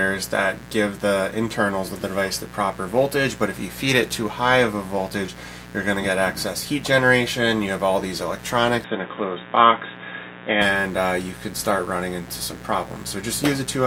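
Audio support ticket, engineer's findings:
Mains buzz, whole clip. Steady, raspy 60 Hz buzz with harmonics reaching into the kilohertz range, sitting around 20 dB below the signal. Probable dimmer, rectifier or unshielded cable injecting switching spikes twice per mains cycle into the input chain.

Input switched to a poorer device, 8.84 to 10.62 s. Sound turns dull and boxy, nothing above 3.8 kHz, new noise floor roughly 30 dB under the signal, level unchanged, no gap at the switch. Likely cause is the system swapping inputs mid-recording, then clearing up again at 10.62 s.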